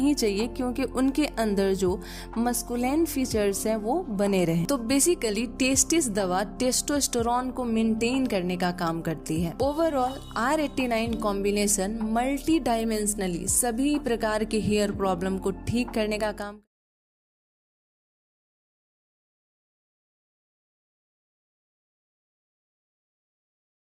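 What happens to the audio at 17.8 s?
At 17.8 s the audio is intact, with no fault of any kind present.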